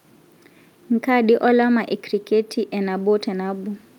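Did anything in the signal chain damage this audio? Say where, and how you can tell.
No, nothing along the signal chain audibly damaged this speech recording, and the signal arrives intact with no stage leaving a trace that can be heard.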